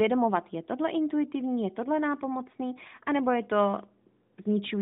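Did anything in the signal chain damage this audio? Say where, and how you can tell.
No, nothing in the chain damaged this speech; it simply carries the narrow, phone-like band of an AMR narrowband mobile codec path, roughly 150 Hz to 3.7 kHz, which fits the codec's top 12.2 kbps mode.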